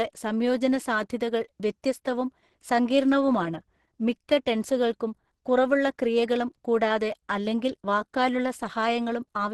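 Throughout the speech, the sound has the signature of heavy Opus compression, likely at a very low rate of around 12 kbps. Nothing is present above about 12.1 kHz, which fits the super-wideband limit of the codec's hybrid speech mode, and the voice comes across muffled and hoarse, with a rough, grainy texture. Unlike MP3 damage, there is little swirling or watery warble from emptied bands; most gaps are filled, so the harm shows as noisy roughness instead.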